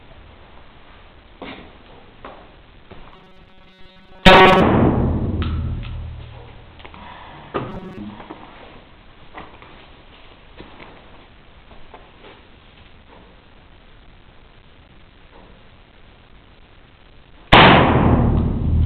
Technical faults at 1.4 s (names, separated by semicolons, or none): none